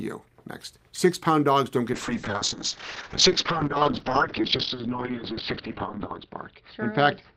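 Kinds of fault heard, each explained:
Call bitrate drop: just after "pound dogs don't", around 1.93 s, the encoder's budget collapses from 64 to 6 kbps and the top end closes from 20 kHz to 6 kHz, so the speech turns muffled and coarse, bottoming out for 2.62 s. A steady bandwidth squeeze, not dropouts or clicks, marks it apart from packet loss.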